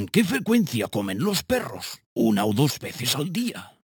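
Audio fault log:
Throughout: imaging from sample-and-hold upsampling. A bright metallic fizz sits above the sound, with the lowest mirror copy filling roughly 6 to 12 kHz at about 15 dB below the signal, which points to a 12 kHz stream held up to 48 kHz without smoothing. Unlike steady hiss, its level rises and falls with the sound. Unlike distortion harmonics, which rise with pitch, this copy falls as pitch rises.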